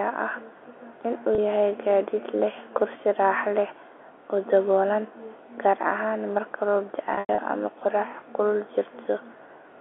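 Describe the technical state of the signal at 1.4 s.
At 1.35 to 1.38 s, just before "yahay gaadiid leh kursi", there is a packet loss with pitch repetition: roughly 30 ms of audio went missing, which fits a single lost packet. The receiver bridged it by looping the last pitch cycle, so instead of a gap the sound briefly holds with a buzzy, frozen quality before resuming. That smooth held tone, with no click and no silence, separates it from a plain dropout. The narrow telephone band around it is ordinary G.711 coding.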